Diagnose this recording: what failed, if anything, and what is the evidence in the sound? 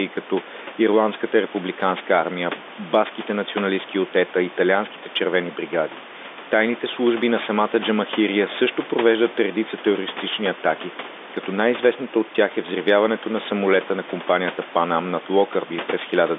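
Nothing has failed: the speech sits in a telephone band of roughly 250 Hz to 3.6 kHz, consistent with G.711 A-law coding, the call microphone processing upstream removes only the lowest bass, the room noise stays about 20 dB under the speech, and the coding adds at most a faint level-following hiss.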